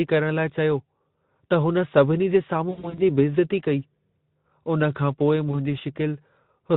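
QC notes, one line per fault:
2.69–3.11 s and 5.51–5.56 s, VoIP packet loss concealed by the speech codec: gaps totalling 180 ms, the longest 80 ms, then a single 20 ms gap, are filled by extrapolating the last pitch and filter. These patches sound buzzy or noise-like and fading. A spectrogram shows smeared, repeated harmonics, and the waveform shows decaying envelopes.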